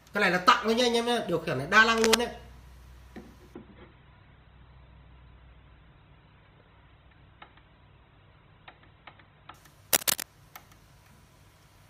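From 1.93 to 2.15 s a dense, uneven burst of scratching and rustling sits over the sound, roughly as loud as the audio itself. The same gritty crackle returns from 9.93 to 10.24 s. This is cable scratch noise, likely from a worn cable, connector or control being moved so that its contact resistance jumped about rapidly and fed bursts of noise into the signal.

Between those two bursts, at 3.54 s, the audio abruptly turns dull, with nothing above 4.2 kHz, and it stays that way without any gap until 9.54 s, when full clarity snaps back. This is an adaptive stream at a lower bitrate. The player switched to a leaner version of the stream for six seconds while the connection slowed. The heavy treble loss points to a drop from around 64 kbit/s Opus to roughly 12 kbit/s.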